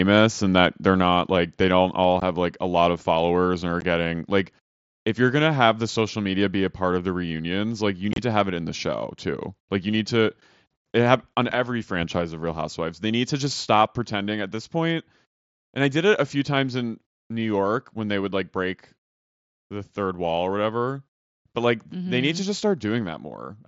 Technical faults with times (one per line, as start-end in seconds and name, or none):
1.02 microphone volume stepped down
2.04 microphone volume stepped down
2.20 unconcealed Bluetooth headset packet loss
3.81 unconcealed Bluetooth headset packet loss
8.12-8.18 unconcealed Bluetooth headset packet loss
11.55 microphone volume stepped down